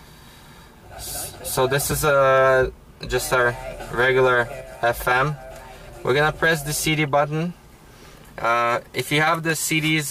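At 1.92 s the sound jumps forward abruptly, as if a sliver of it has been snipped out and the two edges pressed together with no gap of silence between them. Roughly 20 ms goes missing, so it registers as a brief skip. This is a case of audio missing between chunks: the capture or processing chain, working in blocks of about 4 s, likely dropped that short piece while closing one block and starting the next.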